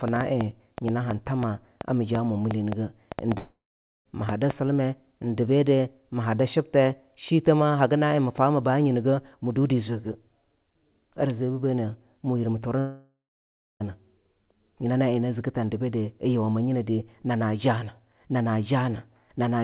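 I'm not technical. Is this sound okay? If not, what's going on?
No. From 0.08 s to about 4.5 s there's a train of clicks: roughly twenty sharp ticks, about four or five a second, unevenly spaced and loud enough to poke out above the speech. The likely culprit is interference from nearby gear or a faulty connection or power supply.

There are also two long network dropouts, where the audio simply didn't arrive. At 3.38 s about 0.7 s goes missing, and at 12.79 s about a second does. Each starts with a brief fading buzz, then goes silent until the speech resumes, with that bit lost. A connection hiccup is the likely cause.

The call line itself cuts everything above 4 kHz, which is why it sounds phone-like.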